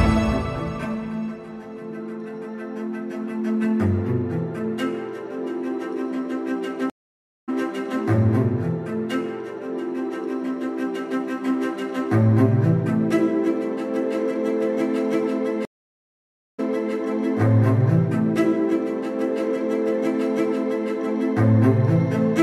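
A stream reconnect occurs from 6.90 to 7.50 s. The audio drops out for 579 ms, then returns at a later point, having skipped around a third of a second, so a piece of the sound is simply missing. A second reconnect follows from 15.65 to 16.93 s, with a 934 ms silence, after which playback resumes 348 ms earlier and repeats material already heard. Each time the connection broke, the player reconnected and started a fresh decoder mid-stream, so the first frame or so comes back muted or fading in.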